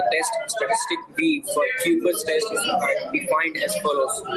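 Gain pumping runs throughout the speech: the gain swings by roughly 15 dB, ducking under each louder sound, leaving loud and quiet passages squashed together. The likely cause is input gain set far too high, with a fast limiter repeatedly clamping it.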